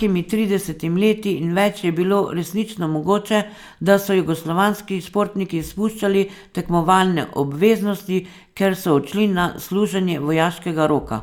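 No technical faults are audible.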